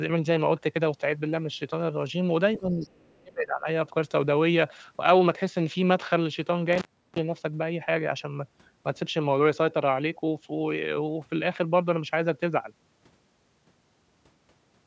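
From 2.58 to 2.93 s the speech dips by roughly 15 dB, the likely result of speech suppressed in double talk: with both ends talking, the echo canceller could not tell the local talker from loudspeaker echo and pulled the level down. It returns, then sinks again from 3.2 to 3.67 s, this time by around 30 dB, close to cutting out. The dips line up with activity from the far end.

That far end is audible between 2.81 and 3.19 s. The other side's voice is leaking through, faint at roughly 35 dB below the main speech. Residual echo the canceller likely failed to remove is the cause. What marks it as leakage rather than background chatter is its timing: it overlaps the first suppressed stretch and ends just before the second.

At 6.73 s the audio breaks off for about 0.34 s and comes back by 7.19 s, the signature of an intermittent contact. A loose plug opens the line, so the edges crackle and only faint hiss remains in the gap. 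That hard, noisy cut sets it apart from the ducking of double-talk suppression. Throughout, the band stops at 8 kHz, consistent with normal call microphone processing.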